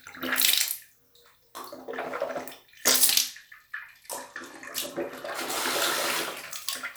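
At 3.10 s there's a Bluetooth SBC bit pool drop that lasts until 5.27 s. The link seems to have gotten congested, so the encoder cut its bit budget to keep the stream going. The dullness fits the bit pool falling from 31 to about 15, around 105 kbps. With that little to spend, the top sub-bands get starved and everything else is quantised coarsely, so the sound loses its treble and picks up a gritty, grainy noise until the rate recovers at 5.27 s.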